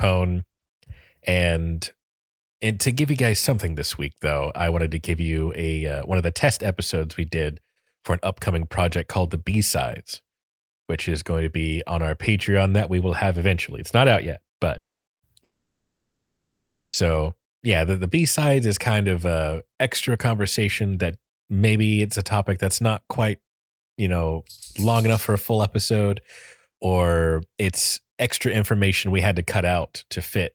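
Right after "not out yet", at 14.77 s, the speech breaks off into a brief fading continuation of the last sound and then near-silence until 15.10 s, with about 0.3 s of audio gone. This is likely a long network dropout: nothing reached the receiver, so it stretched the final sound briefly, then had nothing left to play, and the speech picks up past the lost section.

Moments later, from 15.13 to 15.22 s, a short held buzz or fading hiss replaces the speech before it jumps ahead. This is a burst of packet loss. Roughly 60 ms of audio never arrived in time, so the receiver kept repeating the last sound at falling level to bridge the gap, and the audio in between is simply missing.

At 15.43 s a second, much longer break begins. After a quick fading tail there is silence or a faint steady noise for nearly 1.5 s, until 16.96 s, when the speech returns with that whole stretch lost. This points to another long network dropout, where the receiver's short attempt to continue the sound ran out long before audio started arriving again.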